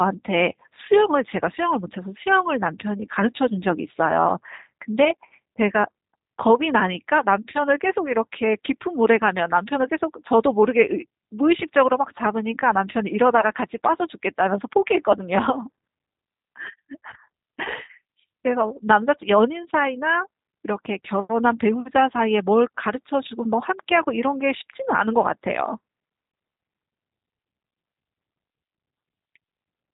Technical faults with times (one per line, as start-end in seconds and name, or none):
0.00-29.93 G.729 codec